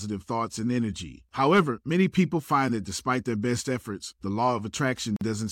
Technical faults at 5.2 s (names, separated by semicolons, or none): gap at a join of encoded pieces